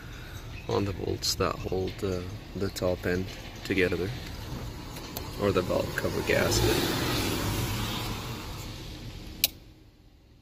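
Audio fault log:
1.64–1.72 s and 3.76–3.92 s, chunks out of order: a 40 ms chunk plays one slot late, then another three slots late, jumbling the sound briefly. Nothing is missing. Each swap leaves three hard joins, seen as waveform steps and thin vertical broadband lines on a spectrogram.
4.72–9.73 s, call bitrate drop: the sound turns rough and muffled as the encoder is starved of bits, consistent with a fall from around 96 kbps to about 20 kbps. It is worst for about 2.7 s. A spectrogram shows the upper band cut off and smeared, blotchy detail until recovery.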